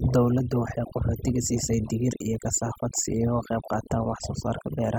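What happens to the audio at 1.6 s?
At 1.6 s a DECT cordless phone buzz runs under the speech, as it does throughout: a nearby radio burst every 10 ms is rectified into a thin 100 Hz buzz, far below the voice, whose dense harmonics set it apart from smooth mains hum. Overdone noise removal is also present across the whole clip, gating frequency bands near its noise estimate so the background drops to twinkling near-silence, unlike the steady pumping of a compressor.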